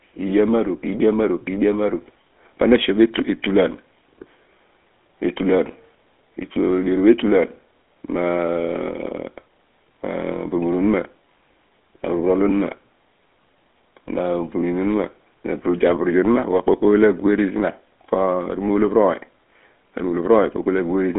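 GSM full-rate codec damage runs through the whole speech clip. The voice is rebuilt from a vocal-tract model driven by sparse regular pulses, giving a plainly audible buzzy, gravelly roughness, consistent with a 13 kbps stream. The band is confined to roughly 250 Hz to 3.5 kHz.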